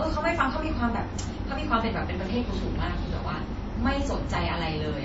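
Throughout, the speech was likely encoded as low-bitrate MP3 and then re-encoded as WMA, which is transcoding between lossy codecs. The WMA stage spends bits on the MP3 artefacts and adds its own, so both artefacts are heard together, with nothing above 7.6 kHz.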